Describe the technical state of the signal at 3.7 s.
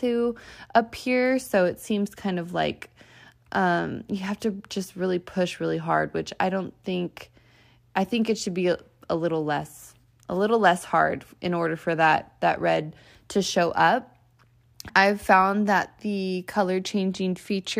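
At 3.7 s the speech signal is intact, with no technical fault present at that moment.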